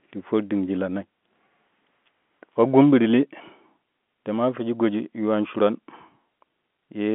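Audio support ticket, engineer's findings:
No faults found; speech arrives over G.711 telephone coding, limited to the expected 200 Hz to 3.5 kHz line band, which is normal behaviour for that path.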